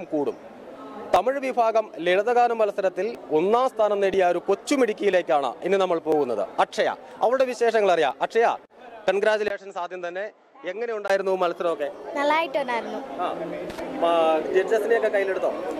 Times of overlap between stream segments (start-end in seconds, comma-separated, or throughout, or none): 1.16, 2.16, 3.15, 4.14, 5.13, 6.12, 7.11, 8.11